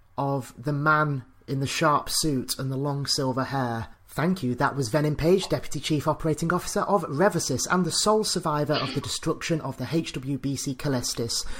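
At 8.03 s the audio jumps ahead, skipping roughly 20 ms of sound. This is most likely a dropped buffer (overrun). Unlike a dropout, no silent gap appears; the two sides of the missing piece butt straight together.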